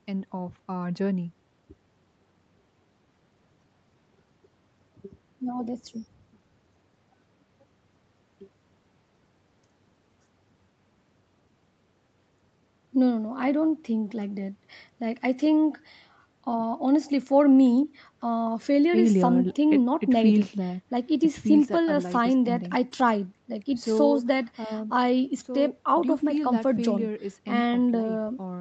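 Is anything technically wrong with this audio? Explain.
No, nothing in this speech recording stood out as a technical problem on listening.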